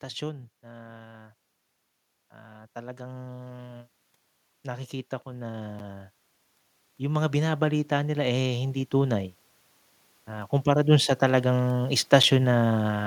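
From 2.14 to 3.88 s the speech and the room behind it swell together by about 4 dB: automatic gain rising, as the gain control decides the input's too quiet and ramps up. It happens again from 6.84 to 9.29 s, about 6 dB, and from 10.12 to 13.02 s, about 5 dB.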